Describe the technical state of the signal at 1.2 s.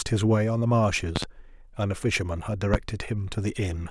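At 1.2 s the signal carries a loud pop, in fact two in quick succession between 1.16 and 1.26 s, peaking roughly 20 dB above the speech. The likely cause is a voltage step or spike, from a plug, switch, static discharge or driver glitch, that the following circuitry shapes into a brief thump. Unlike a dropout or buffer glitch, the speech is not interrupted. It continues beneath the pops.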